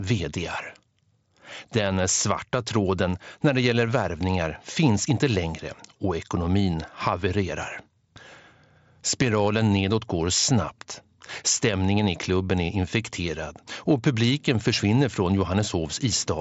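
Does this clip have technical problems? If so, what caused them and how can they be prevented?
No, nothing in this speech clip stood out as a technical problem on listening, so there is nothing here that needs preventing.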